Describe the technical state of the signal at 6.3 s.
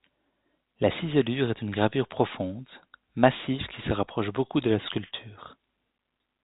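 At 6.3 s the audio is intact, with no fault present, just the telephone-band G.711 sound in which nothing above about 3.8 kHz comes through.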